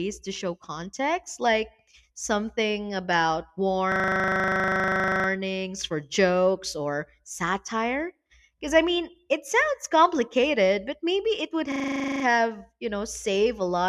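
At 3.92 s, after "something about", a system hang loop replays one 40 ms slice of speech at 25 Hz until 5.28 s, a buzzy stutter from the hardware cycling a frozen buffer. It recurs from 11.72 to 12.24 s, after "but maybe it would".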